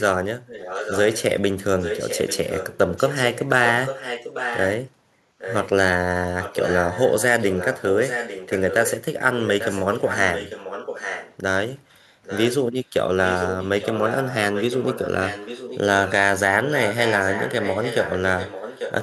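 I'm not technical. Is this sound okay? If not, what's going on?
No, there's an echo leak: one voice comes back a bit under a second later as a quieter copy, at 0.46–1.23, 1.78–4.83, 5.38–5.69, 6.42–9.04 (louder there), 9.39–11.37, 12.23–12.55, 13.24–16.12 and 16.64 to the end. Likely someone's speakerphone isn't cancelling its own playback.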